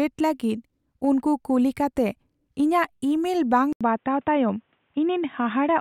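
Speech clip. Right after "ᱤᱼᱢᱮᱞ ᱵᱟᱝ", at 3.73 s, an 80 ms gap is followed by dull, boxy sound with nothing above 3.8 kHz and a new noise floor roughly 45 dB down, at an unchanged level, to the end. The likely cause is the input switched to a poorer device.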